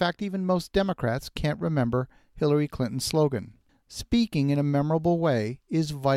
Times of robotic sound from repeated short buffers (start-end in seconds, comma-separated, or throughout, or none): none